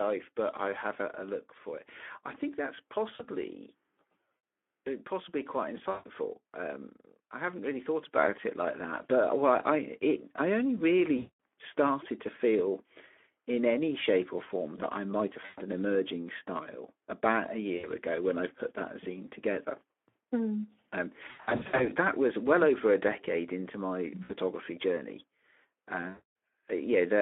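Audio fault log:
throughout: Speex codec. The whole clip sits in a telephone band of roughly 250 Hz to 3.4 kHz, with nothing audible above it. Speech is plainly hoarse and grainy, with a noisy texture, which fits a low Speex setting of around 11 kbps. At that rate the CELP coder has too few bits to model the excitation accurately, so the pitch pulses are replaced by coarse, noise-laden approximations.
3.15–3.25, 5.91–6.08, 11.17–11.38, 15.45–15.60, 17.77–17.90, 21.27–21.91, 24.23–24.31, 26.10–26.31: VoIP packet loss concealed by the speech codec. The gaps last 40 ms (after "it I think that's"), 140 ms (after "uh possibly quite"), 220, 120, 60, 360, 60 and 260 ms. At 21.27–21.91 the losses come in short bursts of up to 80 ms spread over about 520 ms, ending before "that was well over". Each gap turns into a smeared, buzzy tone or coloured noise that fades out. The decoder repeats its last pitch and filter at falling gain, and the sound stays weak briefly after the packets return.
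8.16: microphone volume stepped up. Voice and background noise rise together by about 6 dB in a single step and stay at the higher level. The call software judged the input too quiet and raised the device's capture gain in one jump, so the change is abrupt rather than a smooth ramp.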